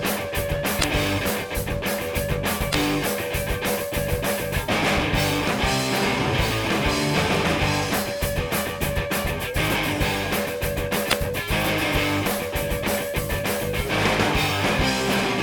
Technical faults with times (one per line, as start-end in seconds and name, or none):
0.77-0.84 damaged data in a compressed stream
2.68-2.75 damaged data in a compressed stream
11.06-11.13 damaged data in a compressed stream